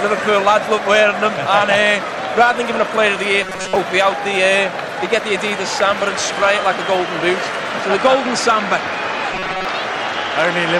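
From 3.42 to 3.75 s, and again from 9.33 to 9.65 s, the sound collapses into a rigid, metallic buzz pitched at 188 Hz that only loosely tracks the underlying audio. This is robotic sound from repeated short buffers: new audio likely arrived too seldom, so playback looped a fragment of roughly 5.3 ms over and over, stamping that fixed pitch onto the sound while most of the real audio in each stretch was skipped.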